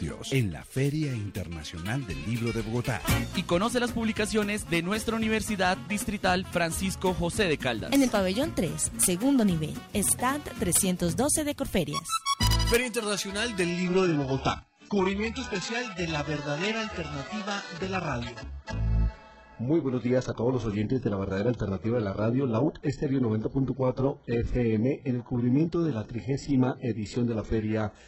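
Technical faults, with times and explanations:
7.95 s, 9.03–9.06 s, 10.09–10.12 s, 10.76–10.80 s and 12.43–12.76 s, integer overflow: Loud peaks pushed past the largest integer value. They wrapped to the opposite sign instead of being limited. The overshoot is small, up to about 3 dB. Each flip still spans the full range, so it sounds like a harsh crack.
13.70 s to the end, adaptive stream at a lower bitrate: The quality drops suddenly, with no gap. Nothing remains above 8 kHz, so the top end is cut away. Codec artefacts rise. This fits a switch from about 96 kbit/s AAC-LC down to about 8 kbit/s HE-AAC.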